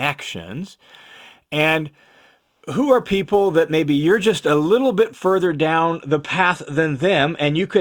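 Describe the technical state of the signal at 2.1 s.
A hiss and roughness riding on the speech, strongest on loud, bright sounds, marks sample clock jitter from 0.0 to 5.47 s, ending before "down the path". Timing wobble of a few microseconds leaves error around 30 dB below the signal.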